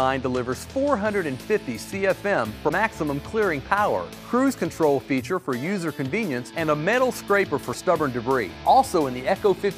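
At 2.68 to 2.71 s and again at 7.72 to 7.75 s the sound skips ahead with a brief glitch, about one 26 ms frame long. That's likely a broken MP3 bit reservoir: frames went missing, and the next frame read borrowed bytes that weren't its own.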